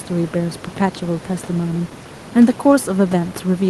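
Nothing in this speech recording stood out as a fault on listening.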